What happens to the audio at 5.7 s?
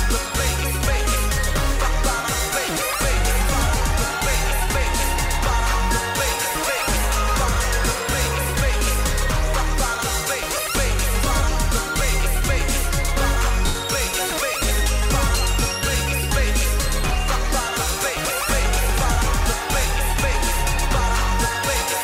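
Nothing goes wrong at 5.7 s: the audio runs on intact through that moment, with only the light, even coding of the lossy compression that carries the whole clip.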